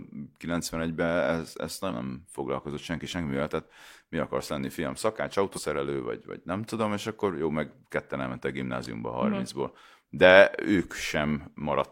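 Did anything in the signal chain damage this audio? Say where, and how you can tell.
Yes. The damage sits at the codec stage: damaged data in a compressed stream. Two short disruptions break the speech, one at 1.86 to 1.92 s, just before "nem foglalkozott senki semmivel", and one at 5.53 to 5.60 s, between "akarsz lenni fiam szakács" and "vagy vagy nem tudom". Each lasts roughly 60 to 70 ms. Corrupted bytes made the decoder misread those frames and lose sync until it found the next valid frame header.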